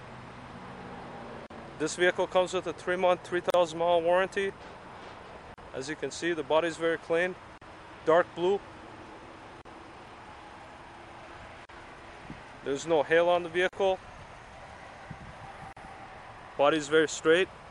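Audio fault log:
1.47, 3.50, 5.54, 7.58, 9.62, 11.65, 13.69 and 15.73 s: gap at a join of encoded pieces, eight short dropouts of about 37 ms each, one roughly every 2 seconds. It sounds like the audio was encoded in separate chunks and butted together untrimmed, so each join keeps the encoder's start-up delay plus the padded last frame. Codec smearing softens the edges, and the sound picks up right where it stopped.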